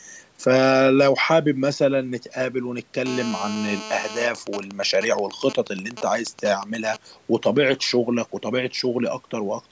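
From 3.06 s to 4.27 s a GSM phone buzz sits under the speech: a hard, raspy tone at about 217 Hz (216.7 Hz) with a dense stack of harmonics, about 12 dB below the speech level. A 2G handset nearby is on a call, transmitting in pulses at that rate, and the audio circuitry rectifies each radio burst into the signal path. Because the handset transmits continuously during the call, the buzz holds steady throughout this stretch.

Between 4.35 s and 6.97 s the interference changes character into GSM signalling bursts: even ticks with a longer 217 Hz buzz twice a second, roughly 10 dB below the speech. A handset nearby is on a call, but its user has gone quiet, so the phone sends only brief groups of bursts instead of a continuous stream. The circuitry rectifies each group, producing this intermittent pattern rather than a constant tone.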